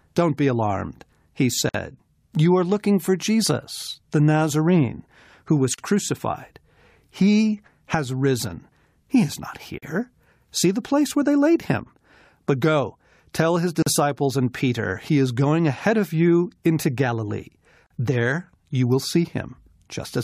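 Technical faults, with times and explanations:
1.69 s, 5.74 s, 9.78 s, 13.82 s and 17.86 s: gap at a join of encoded pieces. The speech drops out for about 53 ms at the first join and 40 ms at each later one, every 4.0 s. The pieces were encoded separately and joined without trimming, so encoder start-up delay and end-frame padding remain as silence. On a waveform, each gap is a flat break with smeared edges. A spectrogram shows a thin blank column across all frequencies, its borders slightly blurred by the codec.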